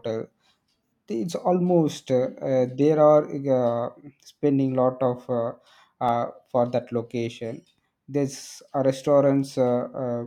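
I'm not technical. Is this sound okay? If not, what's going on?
No, there's one small glitch, at about 6.09 s in this speech clip, right after "spending lot of uh" and just before "for that location". It's a block of digital silence: for about 1.3 ms the sound drops to complete nothing and then snaps back with no fade. That's far too short to hear as a gap, so it comes across as a single tick. It's the kind of thing that happens when the software doesn't hand over its next chunk of audio in time, which fits a 64-sample block going missing.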